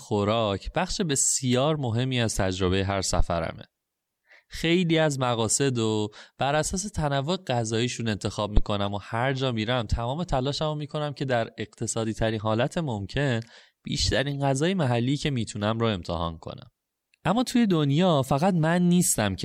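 A phantom power thump occurs at 3.19–3.27 s and again at 8.57–8.64 s: a supply switching on a live input sends a step through the coupling capacitors, giving a deep thump that decays in about 15 ms. A corrupt frame decoded appears at 8.87 s and at 14.29–14.34 s, where damaged compressed frames were played anyway. A few frames at a time put energy at the wrong frequencies, heard as brief chirps or noise bursts, the first louder than the second.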